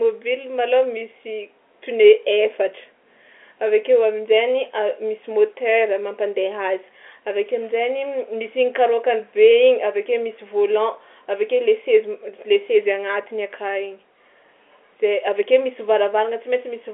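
No technical faults are audible.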